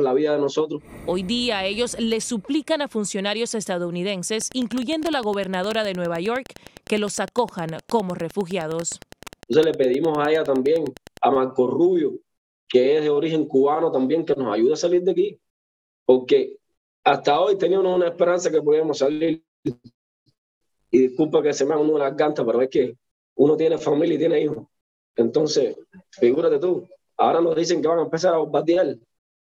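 From 4.32 s to 11.26 s, Wi-Fi interference ticks steadily about ten times a second, every 102.4 ms, roughly 25 dB below the sound, as a nearby radio's beacon is rectified by the audio circuit. A spectrogram shows evenly spaced thin vertical broadband lines, and the waveform shows small regular spikes.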